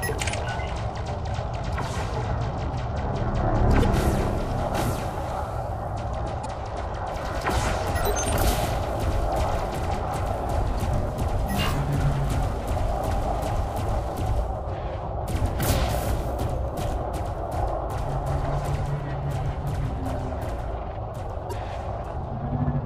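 Four short blips of damaged data in the compressed stream hit this audio, at 3.80–3.85, 6.42–6.46, 10.75–10.80 and 21.49–21.53 s. Each lasts about 40 ms, where the decoder chokes on bad frames, loses sync and skips ahead to the next header.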